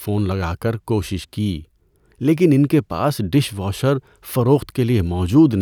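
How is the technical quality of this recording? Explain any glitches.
No glitches can be heard anywhere in the speech. There is nothing to explain, as the audio runs without any interruption or disturbance.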